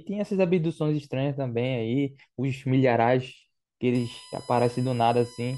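From 3.95 s, USB whine from leaking bus current: a fixed 1 kHz harmonic series peaking at 5 kHz, about 25 dB under the speech, unlike low-pitched mains hum.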